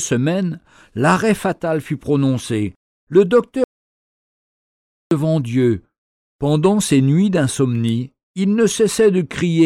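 At 3.64 s the speech stops dead and the audio drops out to silence. It stays there until 5.11 s, a gap of about 1.47 s. The silence is total. No room tone or background hiss carries through it. The speech then resumes abruptly, mid-flow. Whatever was said in that stretch is gone. This audio dropout to silence likely comes from the input being lost for a moment, through a disconnected device, a failed link or a brief mute, while the recorder kept writing silence.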